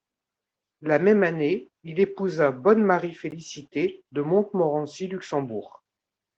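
Speech, with one block of digital silence at 3.31 s: for about 12 ms the signal drops straight to silence and returns with no fade, so the gap is heard as a brief tick. Unlike a lost codec frame, the gap is true silence rather than smeared, concealed sound.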